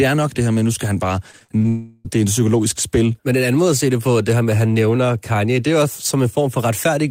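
From 1.31 to 1.66 s the speech turns choppy, the sound of repeated packet loss. Five short holes, the longest about 41 ms, were each patched by stretching the preceding sound, so roughly a third of that span is concealment rather than real audio. On a spectrogram the harmonics smear into flat, repeated bands at each hole. The waveform shows copied, overly regular cycles where the natural variation should be.

Almost immediately after, from 1.68 to 2.07 s, comes a long network dropout. About 0.36 s of speech is simply missing, and the gap is filled with a continuation of the last sound: a buzzy, hissing tone that decays but never falls fully silent. The cause is likely a stall in audio delivery, with the receiver concealing it. On a spectrogram this appears as a frozen, fading spectral smear. The waveform shows a shrinking, repetitive envelope until the speech resumes with the lost portion gone.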